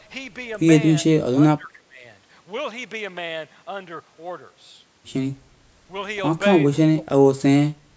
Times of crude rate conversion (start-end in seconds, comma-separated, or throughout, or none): none